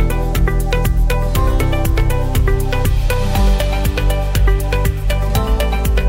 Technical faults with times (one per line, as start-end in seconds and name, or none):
none